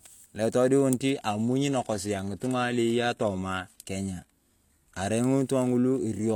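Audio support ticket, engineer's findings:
Adaptive stream at a lower bitrate, 1.10 to 5.10 s. Abrupt quality drop with no gap in playback. Treble thins, with nothing above 14.9 kHz, and codec artefacts rise on the speech. Sounds consistent with a switch from a mid-rate AAC rendition to a low-rate HE-AAC one. Probable component is the player's adaptive bitrate logic, stepping down on reduced throughput and stepping back up at 5.10 s.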